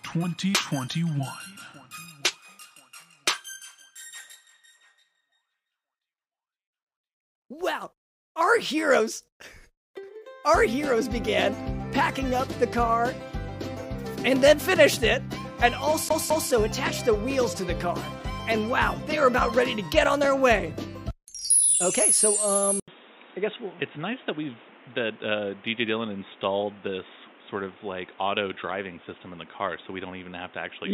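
From 16.09 to 16.51 s the CD is stuck on one turn: a 0.21 s slice plays twice with a mute at each jump, an even stutter unlike random dropouts. At 22.80 s, after an 80 ms silence, the sound turns dull and boxy, with nothing above 3.8 kHz, a level shift of roughly 5 dB and new background noise, likely from input switched to a poorer device, not gradual filtering.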